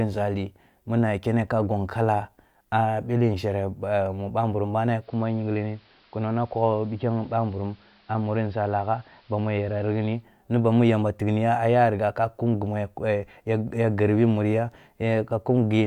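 Digital radio blending to analogue runs from 4.97 to 10.25 s in this speech: the receiver loses its digital signal and cross-fades over 122 ms to the station's AM broadcast, dropping level about 2 dB and raising hiss roughly 35 dB below the signal, before blending back.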